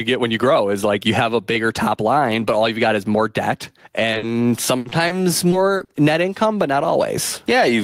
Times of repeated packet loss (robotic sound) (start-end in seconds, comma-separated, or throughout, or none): 4.11-5.91